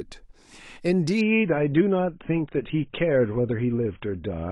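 Speech, and at 1.21 s it abruptly turns dull and papery with no gap, staying that way to the end. That's an adaptive stream at a lower bitrate: nothing survives above 3.8 kHz, which fits the player dropping from roughly 96 kbit/s AAC to about 16 kbit/s.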